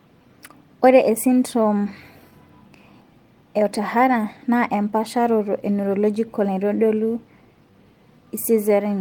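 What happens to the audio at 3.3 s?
At 3.3 s you're in the middle of a run of repeated timing corrections that spans 0.22 to 8.76 s. The receiver keeps stretching the audio with tiny repeats, so playback sits at about 99% speed and gains roughly a tenth of a second overall. If you hear them at all, they come through as slight hiccups or an unsteady tempo.

Behind that is clock drift between sender and receiver. The sender's clock runs about one and a half percent slow, so the jitter buffer keeps draining and the receiver has to pad it out. That's why those small, unevenly spaced stumbles recur right through the sound.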